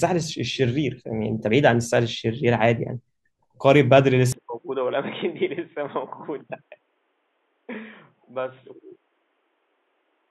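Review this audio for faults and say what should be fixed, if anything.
From 4.32 s to the end, the speech abruptly turns dull and boxy, drops about 10 dB in level, and picks up a new background noise sitting roughly 40 dB below the voice, with no gap at the change. Nothing remains above 3.8 kHz. This is most likely an input switched to a poorer device, such as a headset in call mode, whose narrower band and different noise floor replace the original microphone mid-recording. To prevent it, lock the recording input to the intended microphone and disable automatic device switching before recording.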